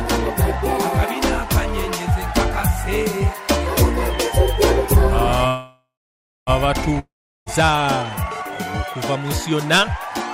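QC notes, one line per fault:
5.47–6.50 s, call audio freeze: the last sound smears into a fading buzz, then roughly 0.6 s of silence, and the audio resumes where it stopped, a second late. Likely packets stalled and the jitter buffer ran dry.
6.99–7.49 s, long network dropout: another fading buzz into about 0.4 s of silence, but this time roughly half a second of audio never returns, likely lost in transit.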